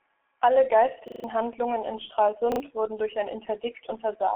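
The whole clip has heavy G.723.1 codec damage. Nothing survives above 3.8 kHz, and the slow, low-rate coding (fits about 6 kbit/s) leaves the speech muffled and hoarse with smeared consonants. At 1.08 to 1.24 s, a repeated buffer makes a chunk loop several times with hard joins, which fits a 40 ms buffer and loses roughly 150 ms. It stutters again from 2.52 to 2.6 s, just before "wurden durch ein".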